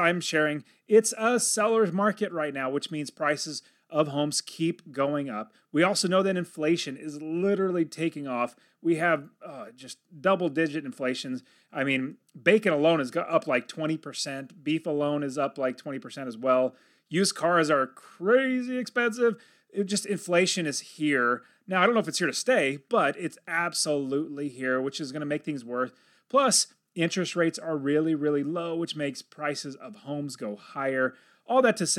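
No technical faults can be heard anywhere in the speech recording. There are no events to place in time order.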